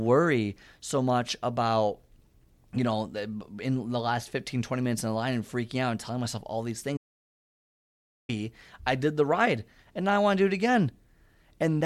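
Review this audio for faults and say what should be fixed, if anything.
The speech cuts to dead silence at 6.97 s and returns at 8.29 s. That is 1.32 s gone, with no room tone. This audio dropout to silence likely means the input was lost while zeros were written. Secure connections and monitor input during recording.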